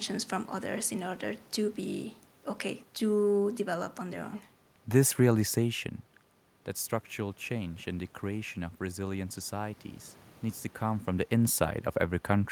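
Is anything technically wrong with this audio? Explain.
No, nothing technical is wrong: the steady background noise belongs to the room, and the level changes around 5.5 s and again near 10.5 s come from the talker moving relative to the microphone.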